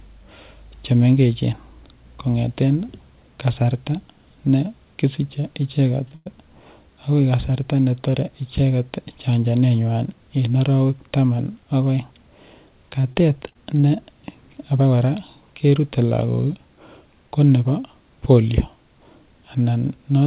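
Speech heard through a narrowband call path, with nothing above 4 kHz, which fits a G.711 mu-law link at 64 kbps, has three timing faults. At 6.08 to 6.13 s a sound is held about 30 ms too long with a faint buzzy sustain, then carries on with nothing lost. This is a short stall from a late packet: the jitter buffer ran dry, the receiver stretched the last sound until the packet arrived, and playback resumed from the same point, 30 ms later than before. Immediately after, from 6.15 to 6.38 s, the audio hangs again, this time for about 107 ms, as a continued buzz that tails off without dropping to silence. Then the speech picks up where it stopped, with no content skipped. This call audio freeze was likely caused by packets being held up in transit, which emptied the buffer. The receiver bridged the wait with synthesized continuation, pushing everything after it roughly 107 ms later. From 13.01 to 13.85 s the speech turns choppy. 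There are five short breaks, none longer than 20 ms, with about 100 ms of sound missing in total and roughly 12% of that stretch filled in. This is repeated packet loss: packet after packet went missing, and each hole was patched by extending the previous sound just before the next loss arrived, giving the stuttering, choppy texture.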